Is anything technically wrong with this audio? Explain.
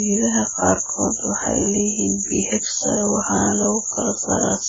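Yes. Throughout, the speech sounds dull and smeared, with a warbling, fizzy edge and nothing above 7.4 kHz. The likely cause is AAC compression: heavy coarse quantisation of frequency lines that lowers the cut-off and leaves spectral holes, consistent with roughly 12 kbps.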